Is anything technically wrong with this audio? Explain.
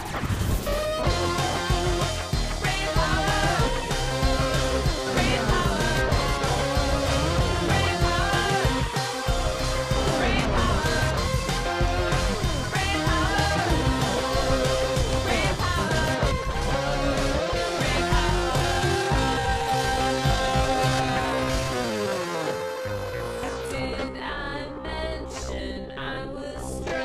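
Yes. A time-stretched section runs from 18.28 s to the end of the clip. The audio there plays at about 0.55 times its original pace, likely because software lengthened that stretch to fill a set duration and preserved the pitch by repeating short fragments rather than slowing playback outright. The pace drops suddenly at 18.28 s while the pitch holds steady, and the slowed material drags.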